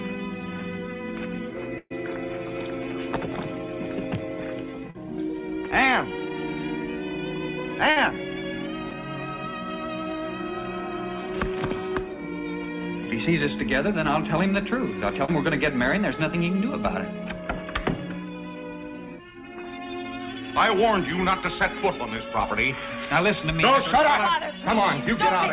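Audio carried over a call path whose band stops at 4 kHz, which fits a narrowband G.711 mu-law link, suffers two bursts of packet loss. From 1.78 to 1.92 s about 120 ms of audio never arrived. The receiver stretched the last sound for roughly 122 ms, turning it down as it went, and that fill ends in about 20 ms of silence before playback resumes with the stretch skipped. At 7.90 to 7.98 s a similar 60 ms loss is bridged by about 57 ms of fading continuation. The audio then jumps ahead.

Three shorter losses were concealed rather than bridged. Each is a brief smear or wobble where the receiver extended the preceding sound and blended back. At 4.90 to 4.96 s, 40 ms went missing and about 41 ms was filled. At 8.90 to 8.97 s, 20 ms was lost but only about 10 ms was synthesised, and a little extra time was inserted. At 15.25 to 15.30 s, 40 ms dropped out and about 34 ms was patched.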